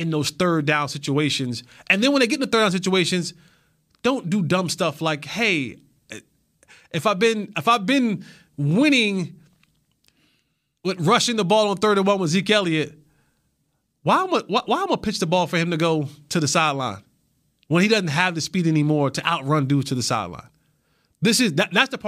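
No technical faults can be heard anywhere in the speech. There is nothing to flag at any point in the recording.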